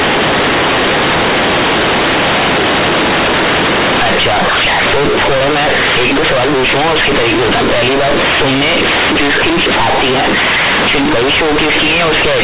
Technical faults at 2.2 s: companded audio read as linear

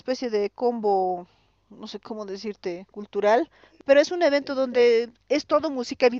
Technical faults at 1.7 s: none

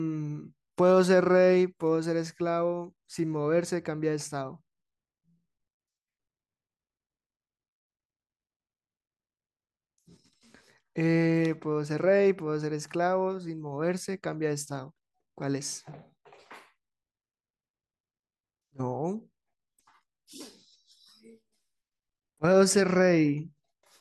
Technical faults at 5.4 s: none

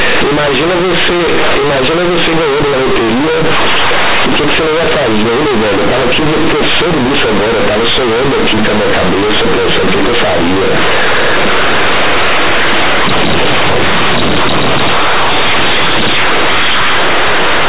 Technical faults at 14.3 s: companded audio read as linear

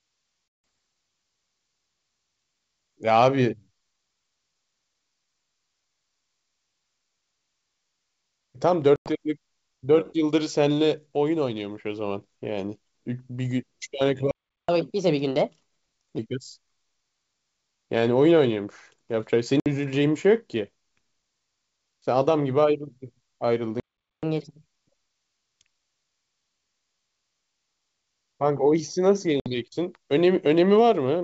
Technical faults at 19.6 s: packet loss on an ADPCM call

